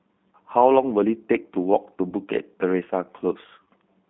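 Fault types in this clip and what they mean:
G.729 codec: the speech sounds rough, slightly synthetic and narrow, held to about 150 Hz to 3.6 kHz, because an 8 kbit/s codec rebuilds it from simple models.
VoIP packet loss concealed by the speech codec: two brief, fading smears where the decoder stretched its last frame to cover a lost 30 ms packet.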